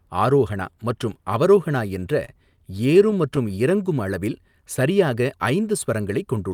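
From 1.87 s to 3.52 s, just after "ஆரோஹனா மற்றும் அவரோஹனா", the speech shows scattered short gaps: around ten packets went missing or arrived too late, and the receiver covered each hole by stretching the preceding sound. Together they patch roughly a tenth of a second, the longest near 30 ms, so the speech stays clear but carries brief ticks and smeared hiccups. A spectrogram would show thin vertical seams with horizontally smeared partials, and the waveform would show small repeated or flattened segments.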